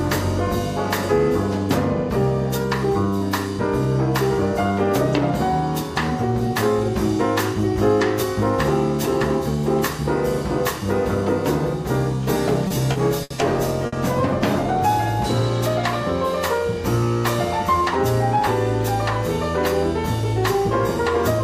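Four short stalls from a late packet occur at 12.67, 12.92, 13.23 and 13.86 s. Each time the jitter buffer ran empty, and the receiver held the last sound for 30, 30, 70 and 60 ms respectively, then resumed. Nothing is lost, but playback drifts later by those amounts.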